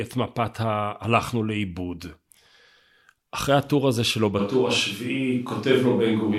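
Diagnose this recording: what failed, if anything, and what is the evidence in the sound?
From 4.41 s to the end the speech turns suddenly roomy and hollow, with thinner bass but little level change. This is a switch to a distant microphone, likely after the close microphone's analogue feed failed. A spectrogram shows weakened lows and reverberant smear between syllables from that instant.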